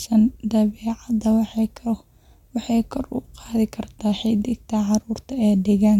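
Nothing in the speech stood out as a technical problem on listening.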